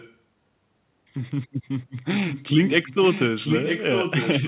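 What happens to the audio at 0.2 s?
Just before that point, from 0.0 to 0.17 s, a faint delayed copy of the speech sits roughly 25 dB under the main signal, trailing by 945 ms. This is likely an echo leak: a loudspeaker-side echo canceller let residual pickup return down the call.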